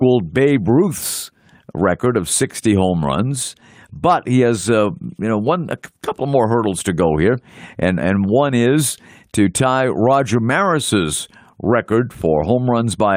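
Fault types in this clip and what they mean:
No fault types are present in this clip.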